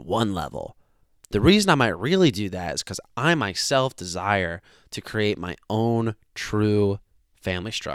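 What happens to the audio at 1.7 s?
Nothing goes wrong at 1.7 s; the speech there plays through intact, with no dropout, click or distortion.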